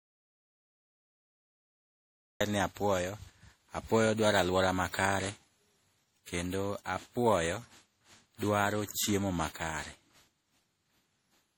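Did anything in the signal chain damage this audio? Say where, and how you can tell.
Yes. At the input or capture stage the source was most likely lost for a stretch while the recorder kept writing zeros. The result is an audio dropout to silence that is already under way when the clip begins and lasts until 2.41 s, where the speech abruptly cuts in mid-flow. The gap holds silence with no room tone, so whatever was said in those first seconds is gone.

In the codec stage the speech was likely decoded and re-encoded repeatedly with a lossy codec, and the damage fits a chain of around seven MP3 passes at 64 kbit/s. This generation loss runs through the whole clip. Each pass requantises on a shifted frame grid, so noise and spectral holes pile up. The speech sounds swirly, hollow and smeared well beyond what a single 64 kbit/s encode would cause, and consonant attacks are blurred.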